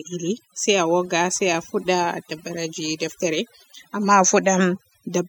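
A speech recording with overdone noise removal from start to finish. The background drops, dotted with twinkling specks. Quiet parts of the voice vanish with the noise. Individual frequency bands are cut too hard.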